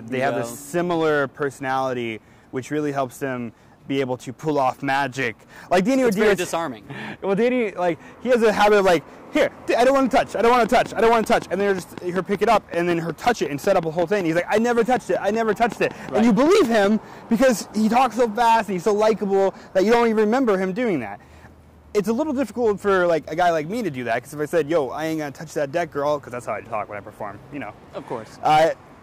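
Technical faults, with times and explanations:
10.66–16.85 s, train of clicks: about thirty regular pulses, 5.3 per second, about 10 dB above the sound, likely interference; evenly spaced waveform spikes, vertical spectrogram lines.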